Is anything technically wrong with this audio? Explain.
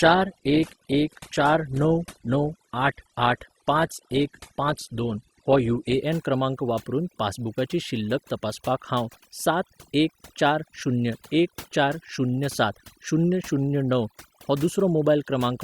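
Yes. Two faults are audible in this speech clip.

Overdone noise removal runs through the whole clip. A noise reduction stage was set far too hard. It pulls individual frequency bands down or out whenever they sit close to its noise estimate. Quiet parts of the voice fall below that line and vanish with the noise. The background drops and breaks up into small twinkling specks.

From 0.0 to 6.0 s, the clip sounds like an adaptive stream starting at a low bitrate. The player opened on a cheap version of the stream so playback could begin fast. Once it had gauged the connection, it switched to a better version. Before 6.0 s, nothing above about 12.2 kHz is present, and codec artefacts are heavier. The low start fits roughly 16 kbit/s Opus, and the later sound fits 64 kbit/s. The quality jumps up suddenly at 6.0 s with no gap.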